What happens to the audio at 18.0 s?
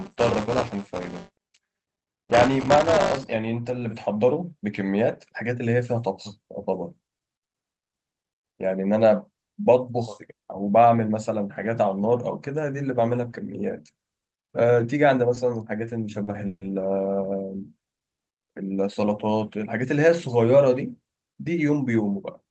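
Around 17.97 to 18.02 s the speech briefly stalls from a late packet. A packet missed its playout time, the jitter buffer ran dry, and the receiver stretched the last sound by about 30 ms, giving a held sound with a faint buzz or dip. Unlike packet loss, nothing is cut out. The speech picks up exactly where it stopped, just 30 ms later from then on.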